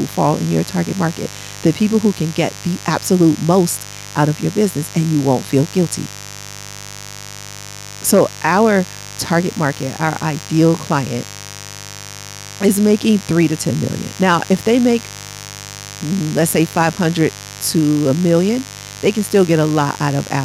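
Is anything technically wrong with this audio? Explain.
Yes. Mains buzz runs through the whole speech clip. Sharp 50 Hz switching spikes add harmonics reaching kilohertz, heard as a steady raspy buzz roughly 20 dB below the speech.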